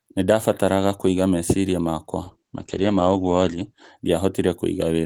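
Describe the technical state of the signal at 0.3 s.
The signal at 0.3 s is intact, with no audible fault in the speech at that point.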